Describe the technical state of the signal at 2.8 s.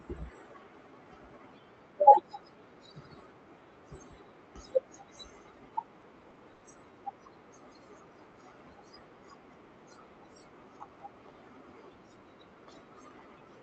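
At 2.8 s the speech is intact, carried through the WebRTC call path with the band limit and coding texture of an Opus call codec and no fault at that point.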